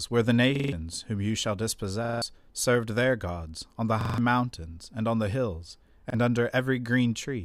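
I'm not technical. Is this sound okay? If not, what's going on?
No. There is a repeated buffer fault at 0.56–0.73 s, 2.05–2.22 s and 4.01–4.18 s. New sound arrived late, so the player replayed its last 43 ms chunk four extra times, a quick stutter that skips about a sixth of a second. At 6.10 s, one repeat briefly stutters.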